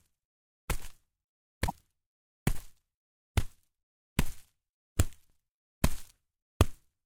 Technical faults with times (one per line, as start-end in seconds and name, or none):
1.63-1.72 damaged data in a compressed stream
3.25-3.30 overlapping chunks
5.30-5.35 overlapping chunks